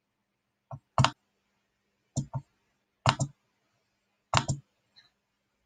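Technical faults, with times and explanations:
1.11 s, broken MP3 bit reservoir: a brief glitch as the sound skips ahead, likely because frames were cut and the next frame borrowed bytes from another frame.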